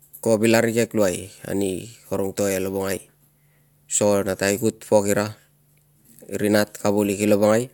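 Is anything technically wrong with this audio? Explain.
No, nothing in this speech recording stood out as a technical problem on listening.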